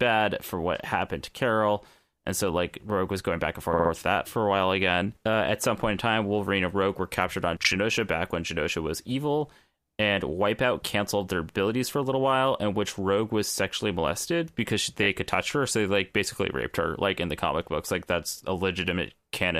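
Repeated frames: runs of compressed speech frames were sent again, so the decoder replays them. A 60 ms block repeats three extra times at 3.73 s, a 40 ms block once at 7.63 s, and a 20 ms block twice at 15.03 s, each heard as a brief stutter.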